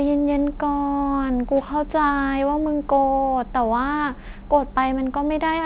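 Speech with gritty, metallic sibilants throughout and energy packed hard against a 4 kHz ceiling. This is aliasing: content above 4 kHz folded back to unrelated pitches about 35 dB below the signal, which points to downsampling to 8 kHz without an anti-aliasing filter.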